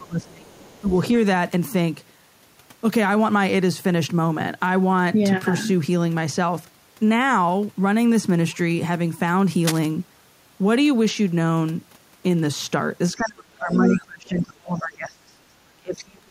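At the start both ends were likely talking at once, and the echo canceller turned the speech down as well as the echo: this speech suppressed in double talk dips the voice by roughly 25 dB from 0.00 to 0.51 s, then briefly by about 15 dB at 0.81 to 0.91 s. Overlapping this, the canceller likely left part of the loudspeaker signal in the microphone, so the other side's voice leaks through from 0.48 to 0.99 s, faint at around 30 dB below the speech.

At 9.61 to 9.87 s, a worn cable or connector likely shifted and its contact resistance fluctuated, producing cable scratch noise: a quick, uneven rustling burst about 10 dB under the speech.

From 13.15 s to the end, double talk likely returns and the suppression runs for roughly three seconds, cutting the voice by as much as about 30 dB. Within it, scraps of the other side's voice leak through at 13.27 to 13.31 s, 13.70 to 13.77 s and 13.94 to 14.01 s, short fragments about 20 to 25 dB below the speech.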